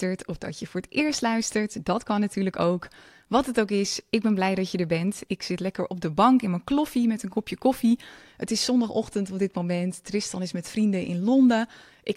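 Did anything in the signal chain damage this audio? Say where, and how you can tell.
No, nothing in the signal chain has left an audible mark on this speech recording. No stage from capture to playback shows any sign of damage.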